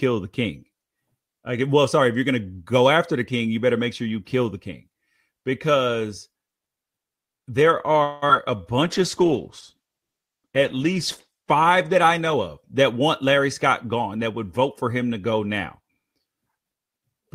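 Speech, with four call-transport faults clustered from about 8 s onward. From 8.03 to 8.24 s the sound stops progressing and the last fragment is stretched into a buzzy tail that fades for 186 ms before the speech resumes where it left off, with nothing lost. On a spectrogram the final harmonics smear horizontally and thin out, and the waveform shows a decaying, repetitive envelope. This is likely a call audio freeze, in which delayed packets drained the jitter buffer and the receiver extended the last sound until they arrived. Just after, at 8.28 to 8.31 s, a short concealed packet loss follows: 40 ms of audio never reached the decoder, and only a 12 ms patch of extrapolated sound covers the hole before blending back. It is heard as a brief smear or wobble, visible as a thin blurred sliver where the spectrogram detail breaks. The delay shrinks by about 30 ms there. From 8.83 to 13.09 s a call bitrate drop takes the encoder from 32 kbps down to 13 kbps, holding the lowest rate for 2.53 s. 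The coarser coding makes the voice rough and watery, and the spectrogram shows the upper band cut off flat, with blotchy, smeared texture below it. Overlapping this, from 12.19 to 14.33 s, ending just before "would vote for him", a jitter buffer speed-up plays the speech at 108% of normal pace without raising the pitch. The receiver trimmed out pitch-period slices totalling about a fifth of a second to reduce excess buffered delay. The waveform shows syllables packed closer, and the harmonic spacing on the spectrogram stays unchanged while the timing compresses, so the passage sounds hurried.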